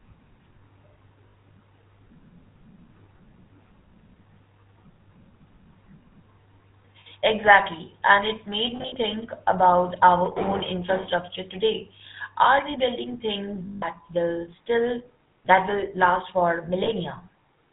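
GSM full-rate codec, throughout: speech is rebuilt from a pulse-driven vocal-tract model with nothing above 4 kHz. The result has a plainly audible buzzy, gravelly roughness, which fits a 13 kbps full-rate stream.

Lost GSM frames come at 1.28 s and 7.0 s (each 60 ms), at 8.76–8.97 s between "it made" and "about our own infrastructure" (short dropouts scattered over 0.2 s), at 13.66–13.85 s after "we building things" and before "will still that" (160 ms), and at 16.84 s after "last for". Each gap is filled by repeating the last good frame, so the sound hangs as a rough, metallic ring.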